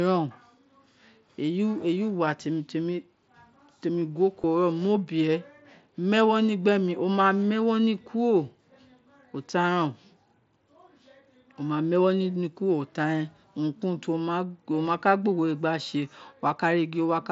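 At 4.42 s there is a concealed Bluetooth headset packet loss: about 15 ms of the link drops, which fits two lost packets, and the receiver patches the hole by repeating the best-matching recent stretch of waveform. The result is a brief buzzy blip in the speech, carried over the wideband mSBC headset path.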